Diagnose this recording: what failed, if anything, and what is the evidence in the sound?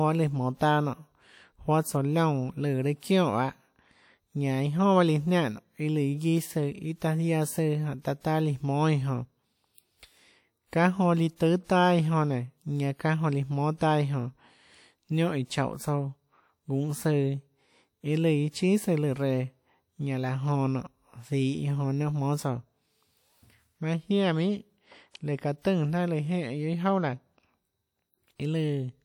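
The codec stage failed, leaving pre-echo: hiss smears ahead of sharp attacks at 3.00, 8.21, 11.36 and 11.64 s (just after "líã tùâ"), spreading 27 to 55 ms. The transform's quantisation noise, scaled to each loud onset, fills the quieter start of its block.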